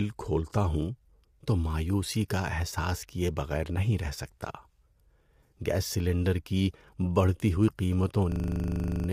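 From the start, the speech carries low-delay AAC compression damage, likely from AAC-ELD. The codec works in very short frames. These cannot separate the pitch harmonics cleanly, and each frame costs extra bits. The grain here fits a bitrate around 32 kbps. The voice sounds rough and grainy throughout. Noise fills the gaps between harmonics. The top band sounds thin and somewhat synthetic.

At 8.32 s a system hang loop begins and runs to 9.08 s. The computer or driver stalled, but the sound hardware kept replaying its ring buffer. A 40 ms slice repeats exactly, over and over. That gives a loop rate of 25 Hz. It sounds like a hard, rattling buzz that stutters in place. Almost no audio is lost. The sound simply freezes on that slice until the loop ends.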